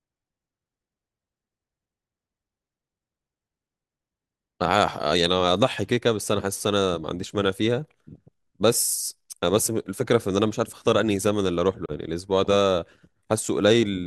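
Packets on the wireless link most likely failed to reach the headphones in time, causing a Bluetooth dropout at 11.86 to 11.92 s in this speech. The output simply goes silent there, a short hole lasting about 60 ms, after which the speech returns further along, as though it had kept playing underneath. The missing stretch, around 30 ms of audio, fits a couple of lost packets rather than a longer link failure.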